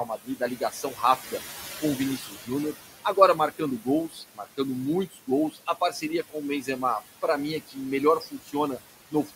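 Speech with noise suppressor artifacts throughout: the room noise, sitting about 13 dB below the speech, is pulled down by about 16 dB between phrases and rises again under them. Speech cut by the noise suppressor occurs at 0.05–1.33 s (before "com o"), 2.17–4.59 s (after "com o"), 5.11–6.68 s, 7.67–7.77 s (after "para mim é"), 8.2–8.54 s and 9.11–9.31 s. In each span, quieter speech was treated as noise and dropped by up to about 13 to 18 dB, so soft sounds come across as faint or swallowed.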